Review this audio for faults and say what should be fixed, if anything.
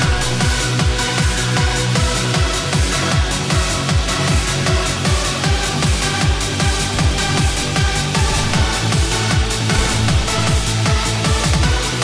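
Nothing here needs fixing; I listened all the way through and didn't hear a single problem worth flagging.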